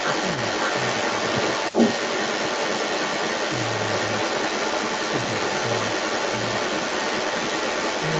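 From 0 to 8.19 s, a delayed copy of the speech trails about 0.39 s behind, about 5 dB louder than the original: an echo leak, likely from a loudspeaker's imperfect echo canceller.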